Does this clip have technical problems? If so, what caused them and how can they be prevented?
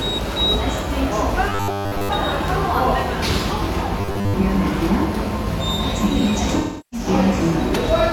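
Yes. Robotic sound from repeated short buffers appears at 1.49 to 2.10 s and again at 4.01 to 4.34 s. Both spans turn into a rigid, metallic buzz at 100 Hz. That pitch matches a 10 ms stretch being replayed over and over. Most of the sound in those spans is a repeat, not new audio. The likely cause is audio arriving too seldom, so the player loops its last buffer. A larger jitter buffer, or steadier delivery, would prevent it.

AAC frame loss with concealment occurs at 3.55 s and from 6.58 to 7.07 s. At 3.55 s about 43 ms is missing, which fits a single lost frame. The decoder patches it from the last good spectrum, so it sounds like a brief smeared, noisy blip. The later gap runs about 341 ms, which fits roughly eight lost frames. There the rebuilt sound decays into a very faint noise floor, then fades back in. Error-protected transport or retransmission would prevent these losses.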